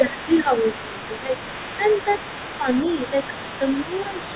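From the start to 1.34 s the speech dips in level, by about 10 dB at its deepest and for roughly 0.7 s in total, because speech is being suppressed in double talk. This is likely an echo canceller that could not separate the local talker from the far-end sound arriving at the same moment, so it turned everything down.

From 0.09 s to the end, the other side's voice leaks through underneath, sitting about 15 dB below the main speech. The likely cause is residual loudspeaker echo that the canceller failed to remove. It differs from crosstalk or background chatter because it is a second voice confined to the same narrow call band as the main speech, which stops at 4 kHz, consistent with a G.711 line.

The same double-talk suppression returns more gently, with dips of about 5 dB: briefly between 1.77 and 2.06 s, affecting only a small fraction of that span, and again from 2.61 s to the end. 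These shallower dips are likely the canceller reacting while the leaked far-end voice overlaps the talker.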